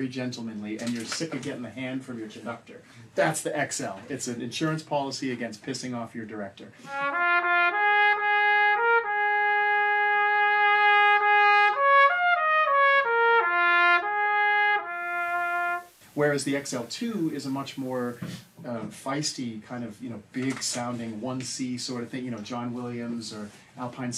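From 14.83 s to 18.77 s there is digital radio blending to analogue: the receiver lost the digital stream and cross-faded over 0.44 s to the FM broadcast, then back. Unlike a dropout, the sound continues at an unchanged level, with hiss well below it.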